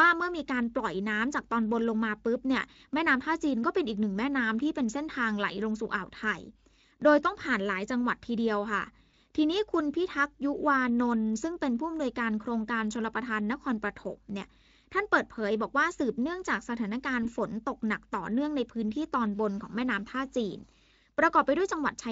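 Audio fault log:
9.11–9.14 s and 17.23–17.30 s, VoIP packet loss concealed by the speech codec: each time, the speech briefly smears into a buzzy tone or coloured noise that fades, which fits a single lost 20 ms frame. The Speex decoder, whose coding damage is light, filled each gap by repeating its last pitch and filter at falling gain. Because each frame builds on the one before, the voice stays weak or distorted for tens of milliseconds after packets return before the speech recovers.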